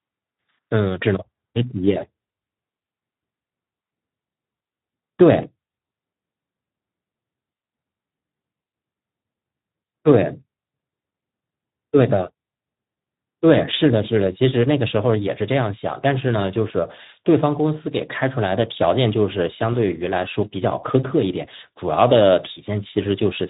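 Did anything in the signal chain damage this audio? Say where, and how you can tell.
Yes. The damage is at the codec stage, and it runs through the whole clip. This is the Speex codec at a low setting. The speech sounds hoarse and noisy. That comes from too few bits for the excitation signal, so the model rebuilds the voice from a rough approximation. Nothing is left above about 3.8 kHz. The band limit and the roughness together fit a bitrate of around 11 kbps.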